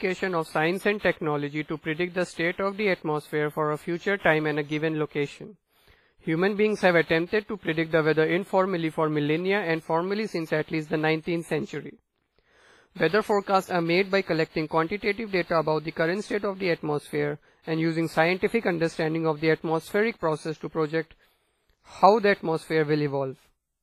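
A speech recording with heavy transform-codec damage throughout: ringing, washy tone, and a hiss that swells and fades with the voice, with nothing above 15.4 kHz. This is most likely WMA compression at a low bitrate, around 24 kbps. The noise follows the signal, unlike steady background hiss. Pre-echo appears at 0.99, 2.33, 4.19 and 7.26 s: a short hiss smears 38 to 59 ms ahead of sharp onsets, softening them. Because it comes before the attack rather than trailing it, it differs from reverb or ringing decay.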